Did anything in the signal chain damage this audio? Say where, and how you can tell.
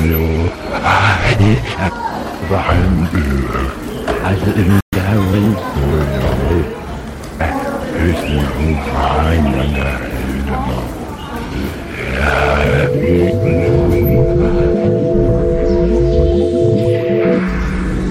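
Yes. A playback stall at 4.80 s silences the sound for 120 ms, likely a starved playback buffer; the waveform shows a flat gap, the spectrogram a blank column.

Catch-up at higher speed follows, from 4.93 to 5.73 s: playback resamples at 1.15x, pitch rises about two semitones, and spectrogram harmonics step up, then settle.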